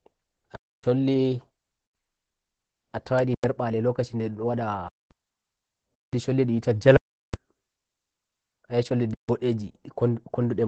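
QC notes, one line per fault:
throughout: Opus voice compression. The SILK coder at 12 kbps keeps nothing above about 8.8 kHz and codes the excitation coarsely, so the speech sounds muffled, hoarse and slightly robotic.
0.56–0.84 s, 1.86–1.95 s, 3.34–3.44 s, 4.88–5.11 s, 5.94–6.13 s, 6.97–7.34 s, 9.14–9.29 s: underrun with held sample. The output buffer ran dry and the last value was held, so the sound stops flat for 93 to 372 ms. Live audio was dropped during each gap.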